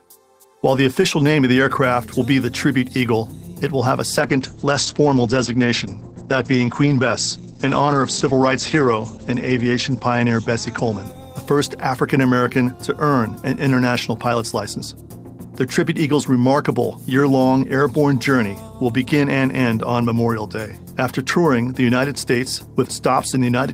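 A call bitrate drop runs from 4.18 s to 12.57 s. The audio turns rough and muffled, with the top end falling from 20 kHz to 8 kHz. It is worst for about 5.1 s. This fits the encoder being cut from about 32 kbps to 10 kbps.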